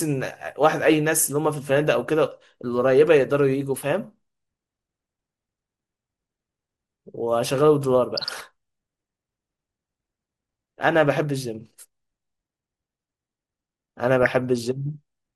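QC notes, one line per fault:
Throughout: MP2 compression. The clip is dull and granular, with a gurgling edge on the speech. This likely comes from MPEG Layer II coding at about 80 kbps: too few bits shut off upper sub-bands, and the remaining bands are coarsely quantised.
1.85 s, 8.11–8.42 s and 14.23–14.39 s: DAB burbling. Brief burbling bursts sit over the speech. Scattered bit errors, around 0.15 to 0.2 percent, corrupt samples, putting short noise blips into single sub-bands, and scale factors, making sub-bands jump in level for up to a frame. The longer bursts fit errors spread across a run of frames.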